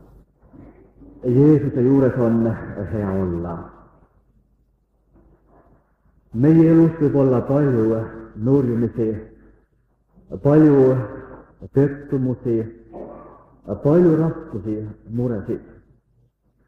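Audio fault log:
No faults can be heard anywhere in the clip. Nothing in the audio calls for a timed entry in this log.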